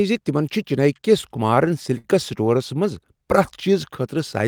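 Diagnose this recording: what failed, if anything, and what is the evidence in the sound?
The network stage failed. Between 1.01 and 2.06 s the speech shows repeated stalls (stutter), starting just after "زِ تِمن چھِ چنیی" and ending before "سٹورس منٛز". Nine short holds break up that second. Each one stretches the preceding sound, and the longest lasts 60 ms and fades. Together they fill about 142 ms, around 14% of the span. Nothing is lost. Packets arrived late, the jitter buffer kept running dry, and the receiver bridged each wait.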